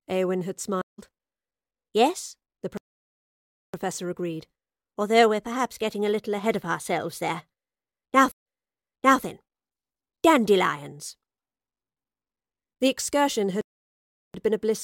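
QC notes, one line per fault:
0.82–1.00 s, stream reconnect: the speech drops out for 164 ms, then picks up roughly 150 ms further on. The connection broke and a fresh decoder joined the live stream mid-flow, so the bit in between never gets played.
2.77–3.74 s, playback stall: 962 ms of dead air, then the speech carries on from where it stopped with "agreed although we're perhaps". That's likely the player running dry of data or its thread getting blocked.
8.32–9.22 s, stream reconnect: 135 ms of silence, but this time it comes back 766 ms earlier, so you hear a chunk repeated. That fits the server resending a burst of already-played audio after the link was re-established.
13.61–14.34 s, playback stall: a 731 ms gap before "been a blissful one", with nothing skipped. Output likely went silent while the player waited on data, then resumed in place.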